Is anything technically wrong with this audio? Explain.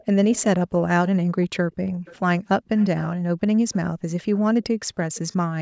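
Yes. Faint, delayed copies of the speech trail behind it at 0.0 to 0.05 s, 1.41 to 1.47 s, 1.86 to 2.17 s, 2.77 to 3.05 s, 3.72 to 3.76 s and 5.15 to 5.36 s. They are well below the main speech, strongest around 2.8 s, and lag by about 358 ms early on and 376 ms later. This is an echo leak: the far end likely played the call over a loudspeaker, and its echo canceller let some of that pickup return.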